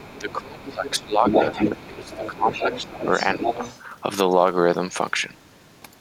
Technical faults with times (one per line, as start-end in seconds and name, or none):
0.00-0.39 other side's voice leaking through
0.18-1.37 speech suppressed in double talk
0.64-3.81 other side's voice leaking through
1.86-3.03 speech suppressed in double talk
3.37-3.58 speech suppressed in double talk